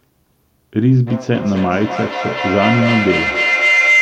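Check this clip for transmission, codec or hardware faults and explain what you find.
There's one fault here, a feedback howl, running from 1.07 s right through to the end of the clip. Two devices in the same room are on the call, so sound keeps circling from loudspeaker to microphone and back, gaining level each trip. Instead of dying away, it narrows onto a tone around 2 kHz, with a loop round-trip time of roughly 300 ms, and peaks at about 2 dB above the speech.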